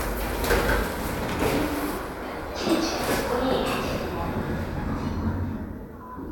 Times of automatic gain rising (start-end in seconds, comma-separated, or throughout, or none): none